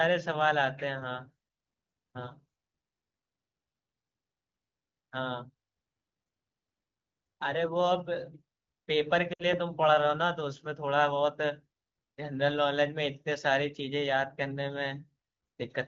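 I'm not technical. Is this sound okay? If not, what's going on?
No. There are lost AMR speech frames from 9.33 to 9.44 s. Radio interference garbled a short stretch of the call's digital data, about 60 ms' worth, which fits three lost frames. The phone's HD Voice (AMR wideband) decoder filled the gap by repeating the last good sound while turning it down, so the speech quickly fades to near silence before recovering, sounding weak or rough for a moment.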